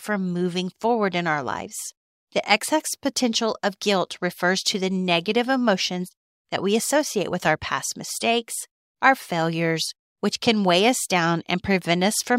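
Nothing in the speech stood out as a technical fault on listening.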